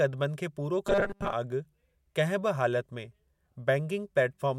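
From 0.87 to 1.33 s, after "खे पूरो", the speech turns into a rigid 200 Hz robotic buzz, likely from repeated short buffers, not silent dropouts.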